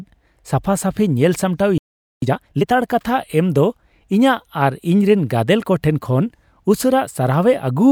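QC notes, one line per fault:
1.78–2.22 s, playback stall: the speech cuts off mid-flow and the output goes silent for about 0.44 s before resuming. This is likely the player running out of buffered data, or its output thread being blocked, so nothing reached the device until it recovered. On a waveform the signal drops abruptly to a flat line; on a spectrogram it shows as a clean vertical blank band with no energy at any frequency.
2.22–2.66 s, time-compressed catch-up: right after the gap the speech is hurried along at twice normal speed for about 0.44 s, yet its pitch stays unchanged. The player is clearing its backlog by removing small segments and cross-fading the joins. On a spectrogram the harmonics keep their spacing but syllables are squeezed closer together. The waveform shows denser envelopes with slight irregularities at the splice points.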